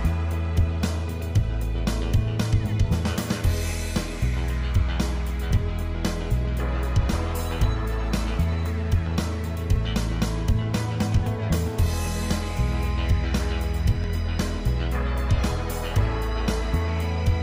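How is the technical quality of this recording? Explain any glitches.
The recording has four isolated clicks, at 1.79, 9.76, 11.16 and 14.04 s. Each is likely dropped samples: about 0.7 ms of the stream is missing, so the waveform jumps abruptly and produces one sharp, brief click.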